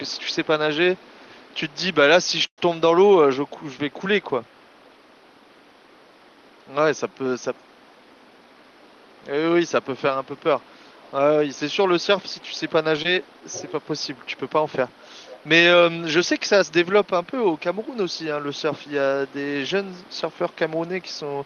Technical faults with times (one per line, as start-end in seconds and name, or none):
0.97-1.76 echo leak
2.46-2.66 call audio freeze
3.45-15.48 echo leak
7.82-8.87 jitter buffer speed-up
13.02-13.05 short concealed packet loss
16.39-19.34 echo leak
19.89-21.46 echo leak